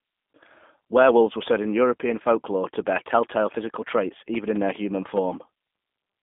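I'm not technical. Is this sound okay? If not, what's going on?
No, it's squeezed through a G.729 codec, a phone-call format that rebuilds speech roughly, so everything above 3.7 kHz is gone and it sounds thin, rough and slightly robotic throughout.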